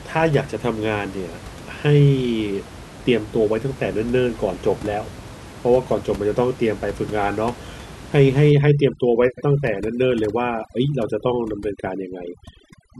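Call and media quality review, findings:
Overdone noise removal, 8.51 s to 12.99 s: background drops and breaks up into twinkling specks. Probable component: noise suppressor set too aggressive, switching individual frequency bands off near its noise estimate and taking quiet speech detail with them. Distinguishing cue: room noise about 17 dB below speech is audible before 8.51 s, then breaks up. A codec or bandwidth limit would dull the sound without gating the background into flickering fragments.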